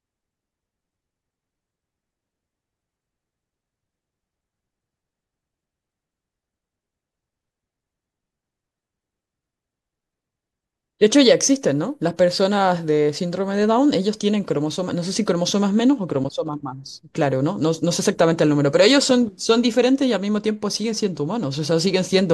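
No technical faults occur at any point in this speech recording.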